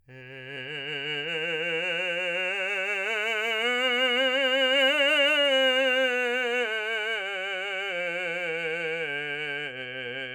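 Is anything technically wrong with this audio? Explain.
No, nothing technically wrong can be heard anywhere in this music.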